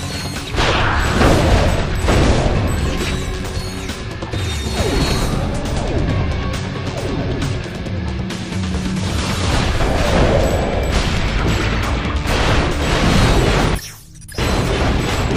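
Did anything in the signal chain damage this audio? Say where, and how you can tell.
No, nothing in the signal chain damaged this audio.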